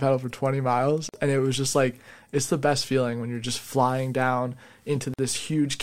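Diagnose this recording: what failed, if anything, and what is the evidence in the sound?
Codec stage: a gap at a join of encoded pieces, every 4.0 s. The gap lasts 47 ms at 1.09 s, before "and it was just", and 49 ms at 5.14 s, after "you're just flying down". Untrimmed encoder delay and end padding cause it. The spectrogram shows full-band blank stripes, softly edged.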